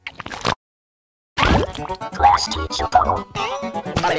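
Call audio with nothing above 8 kHz, which fits G.722 at 64 kbps. From 0.53 to 1.40 s, a call audio freeze: a brief fading tail, 0.81 s of silence, then resumption where it stopped, likely from delayed packets emptying the jitter buffer.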